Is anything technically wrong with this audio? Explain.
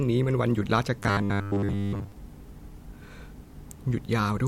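Yes. From 1.0 to 2.12 s there is robotic sound from repeated short buffers: the speech becomes a rigid, metallic 100 Hz buzz that loosely tracks the words. The likely cause is late-arriving audio, with most of that stretch filled by looping a 10 ms fragment.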